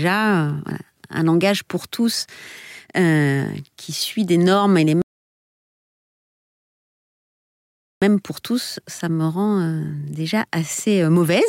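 At 5.02 s the speech falls silent, then resumes at 8.02 s exactly where it stopped: a rebuffering stall, the player waiting for more data.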